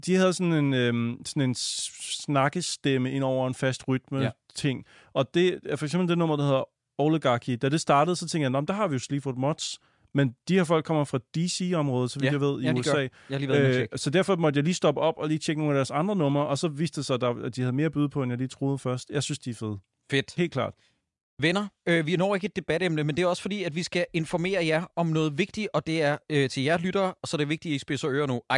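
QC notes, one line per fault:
No faults found in clip.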